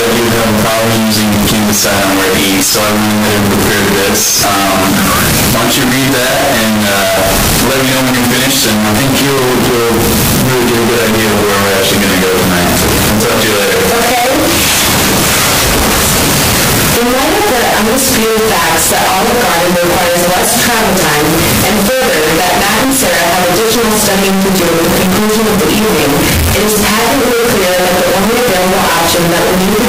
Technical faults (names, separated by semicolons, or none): signed and unsigned mixed up